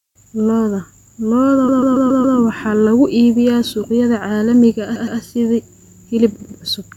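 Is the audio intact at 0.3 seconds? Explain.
Yes, the audio is intact at 0.3 seconds, with no fault audible at that moment.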